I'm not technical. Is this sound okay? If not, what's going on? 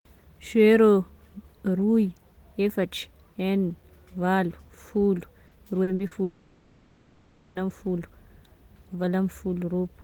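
No. Repeated packet loss (robotic sound) runs from 5.47 to 6.14 s, right after "valo folo": several tiny gaps, each patched by stretching the previous sound, making it choppy and robotic. A long network dropout is the likely cause from 6.23 to 7.58 s: about 1.3 seconds of audio never arrived, and a smeared continuation of the last sound fills the gap.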